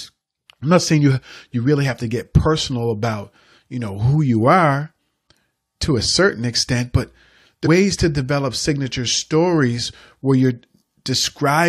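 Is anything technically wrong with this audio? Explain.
Yes. From 7.65 to 7.67 s the speech has damaged data in a compressed stream. Some bytes in the stream were wrong. The decoder misread those frames and lost sync until it found the next frame header. This gives a brief chirp or blip, about 20 ms long.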